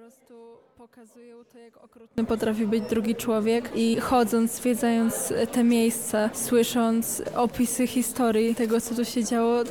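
From the very start until 2.18 s the sound is only a faint, distant leak, about 25 dB below its normal level, before it snaps back abruptly. This is an audio dropout to a faint residue, likely a break in the signal path while the downstream chain stayed live.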